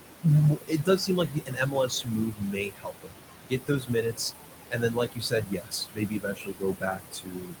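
Speech sits over room noise about 7 dB below it. Noise suppressor artifacts run throughout: the background is pushed down by about 20 dB, sinking between the words and rising under them. Speech is cut by the noise suppressor from 0.55 to 3.16 s, 3.49 to 4.32 s and 4.7 to 7.6 s. Soft parts drop by about 21 to 22 dB and sound swallowed, around two seconds in the first stretch and half a second in the second. From 3.73 to 3.75 s, a 20 ms lost packet is rebuilt from error correction. It sounds like a single lost packet, and the rebuilt copy is briefly rougher and noisier with no gap.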